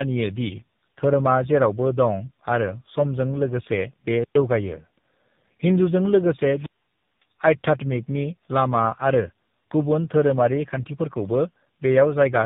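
Throughout, the speech carries tandem speech coding: it went through GSM full rate at 13 kbit/s, then G.711 A-law, then AMR-NB at 7.4 kbit/s, so the second speech codec reworked the first one's errors. Nothing survives above 3.7 kHz, and the voice sounds rougher and more warbly than a single narrowband codec would.

From 4.16 to 4.35 s comes a wireless microphone squelch dropout, with a mute of about 113 ms. The radio signal faded until the receiver's squelch closed the output. A rise of hiss leads into the near-silent hole, which tells it apart from a digital packet gap, where the sound cuts cleanly. The same fault returns from 6.54 to 7.25 s, between "हिंदूजों लोगोसे" and "आध्यात्मिकनि लामा", and this time the mute lasts about 557 ms.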